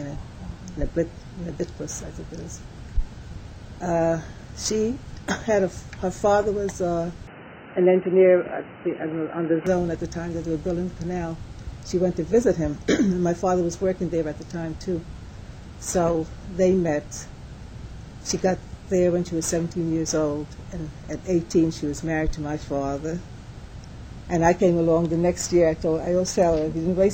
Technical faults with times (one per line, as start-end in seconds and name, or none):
7.27-9.67 input switched to a poorer device